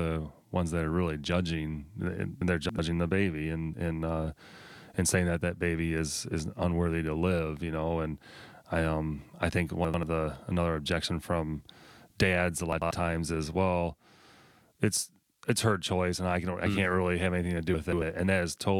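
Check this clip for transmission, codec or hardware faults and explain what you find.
Chunks out of order occur four times, at 2.42–2.79 s, 9.85–10.03 s, 12.73–12.91 s and 17.74–18.02 s. In each, a 93 ms block of speech plays late, after one to three blocks that should follow it. The sound is all there but briefly jumbled.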